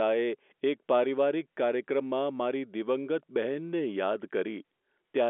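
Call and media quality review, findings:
No audible faults found.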